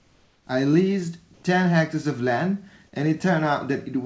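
Comfort noise in place of the background appears from 0.00 to 0.47 s and again from 1.34 to 1.43 s. In both gaps the room's ambience gives way to a flat, textureless hiss, about 4 dB quieter at the start and about 2 dB louder in the brief 90 ms second gap. The likely cause is discontinuous transmission: the sender went silent when no speech was detected and the receiver synthesised noise from a rough spectral sketch, here capped at 8 kHz by the call codec.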